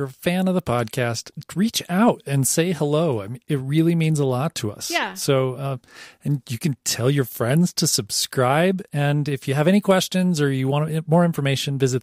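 Nothing in this speech clip points to a technical fault. No event stands out at any point along the timeline.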